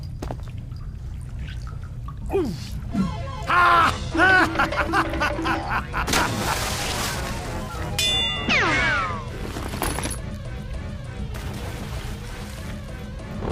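At 2.91 s the sound skips ahead. Roughly a second of audio is simply gone, dropped in transit or discarded when the jitter buffer overflowed. Nothing fills the gap. The two sides of the jump butt together almost directly.

A jitter buffer speed-up follows from 3.01 to 3.56 s. The buffer now held more audio than it wanted, so the receiver trimmed short pitch-period slices repeatedly. Playback runs at 114% speed, hurried but unchanged in pitch, losing about a tenth of a second. A gentler speed-up occurs from 9.21 to 10.73 s at 105%. It again removes about a tenth of a second, and the quickening is subtler.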